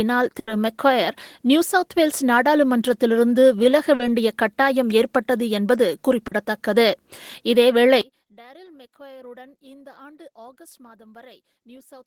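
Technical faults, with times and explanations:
0.39 to 0.50 s, burst of packet loss: About 80 ms of audio never arrived, and the receiver covered the hole by carrying the last sound forward while turning it down, so a held buzz or fading hiss stands in for the missing part. When playback resumes, the 80 ms of material in between has been skipped, and the sound jumps ahead. The longer fill and the skipped material set it apart from the brief smears later in the clip.
3.95 to 4.02 s and 6.27 to 6.34 s, short concealed packet loss: In each spot, about 40 ms failed to reach the decoder in time. It was patched by extending the preceding sound, pitched if voiced, noise-like if not, then crossfaded back into the real signal. Each is heard as a brief smear or wobble, and a short transient may vanish. Unlike the burst near the start, the patch is too short to become a sustained buzz, and the audio around it hardly jumps.
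8.01 to 12.07 s, one channel inverted: From 8.01 s to the end, the level drops by about 27 dB and what remains is faint. Centred material almost disappears, background included, leaving only a faint copy of the small mismatch between the channels. This is likely one stereo channel flipped in polarity, so the shared centre cancels when the channels are summed to mono. A plain volume drop or dropout would lower everything evenly, whereas here only the centre vanishes.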